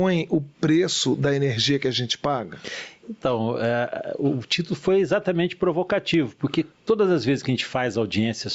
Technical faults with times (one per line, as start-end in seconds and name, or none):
0.00-8.54 gain pumping